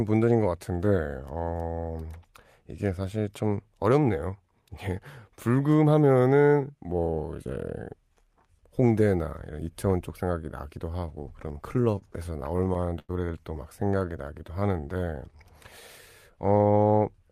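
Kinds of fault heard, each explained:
Repeated stalls (stutter): From 11.33 to 13.11 s the speech catches and drags in 17 brief hitches, the longest 95 ms. Packets kept arriving late, so the jitter buffer repeatedly ran dry and the receiver stretched the last sound, about 291 ms in all, losing nothing.
Jitter buffer slow-down: Between 13.84 and 15.38 s the speech runs at 89% of its normal speed, drawn out but unchanged in pitch. With its reserve running low, the jitter buffer repeated single pitch periods and bits of pauses, adding 184 ms to build back up.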